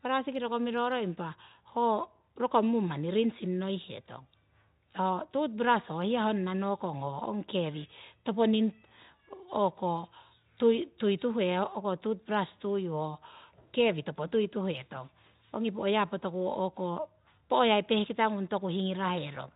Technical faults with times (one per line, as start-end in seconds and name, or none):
none